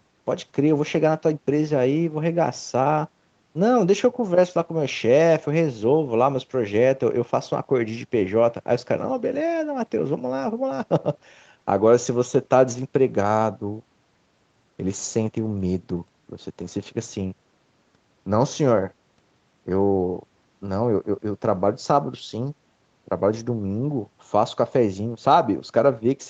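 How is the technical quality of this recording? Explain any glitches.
Nothing stood out on listening; the speech sounds like ordinary call audio, with content topping out around 8 kHz as expected from the call's processing and Opus coding.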